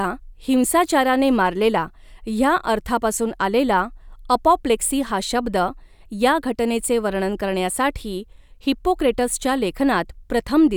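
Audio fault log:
No fault is heard anywhere in this speech clip. Nothing in it calls for a timed entry in this log.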